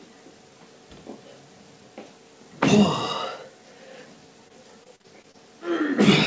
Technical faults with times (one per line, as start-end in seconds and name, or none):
4.48-5.36 repeated packet loss (robotic sound)